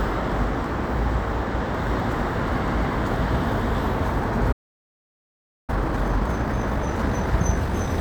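At 4.52 s the sound cuts off in mid-flow. Silence follows until 5.70 s, a gap of about 1.16 s. This is a playback stall. The output simply stops and nothing is heard. The likely cause is the player running out of buffered data, or its playback thread being blocked. When sound returns at 5.70 s, playback resumes.

From 5.70 s to 7.90 s the player makes up lost ground with time-compressed catch-up. It runs at 1.5 times normal speed. Pitch stays normal, so the sound feels hurried rather than higher. The player drops small slices of audio and cross-fades across the joins. At 7.90 s normal speed returns.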